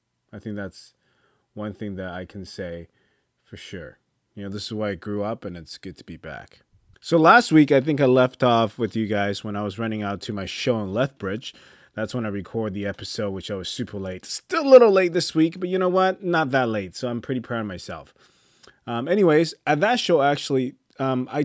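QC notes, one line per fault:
No faults found; the speech carries the normal marks of call microphone processing, with the lowest bass taken out by its high-pass filter and nothing above 8 kHz.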